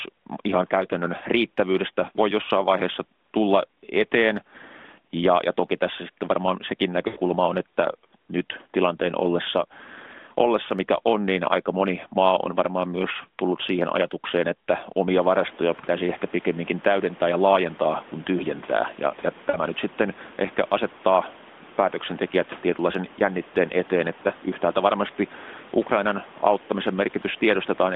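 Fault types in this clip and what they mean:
lost AMR speech frames: Corrupted frames on the mobile link make the AMR-NB decoder cover the gap by replaying its last good pitch and vocal tract settings at falling gain, so speech smears into a brief warble and sags instead of cutting out. It happens three times: about 80 ms at 7.08 s after "tässä sitten varmaan sekin", fitting four 20 ms frames, and about 40 ms at 15.80 s and 19.50 s. Unlike a plain dropout, there is no abrupt silence or click.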